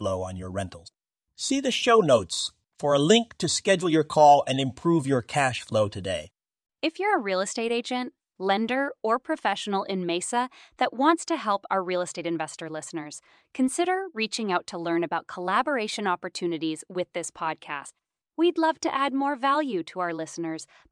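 No technical faults can be heard anywhere in the recording. The speech runs without any break or disturbance in the signal.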